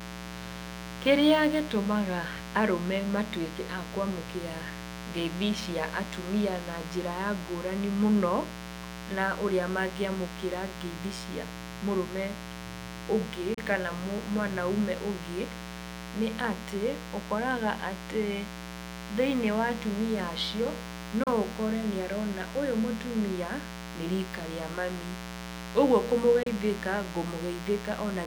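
A steady, raspy buzz sits under the speech for the whole clip, roughly 10 dB below it. This is mains buzz: sharp switching spikes at twice the 60 Hz mains rate leak into the signal, spreading harmonics of 60 Hz up into the kilohertz range.

At 13.54–13.58 s, 21.23–21.27 s and 26.43–26.47 s, the sound cuts to silence and then carries on as though it had kept playing. About 29 ms of audio goes missing each time. This is likely a Bluetooth dropout, where packets reach the headphones too late and are discarded, which fits two lost packets per gap.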